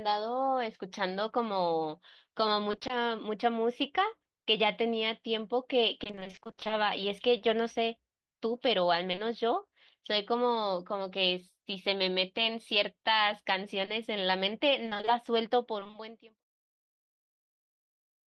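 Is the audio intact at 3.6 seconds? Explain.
Yes, the audio is intact at 3.6 seconds, with no fault at that moment.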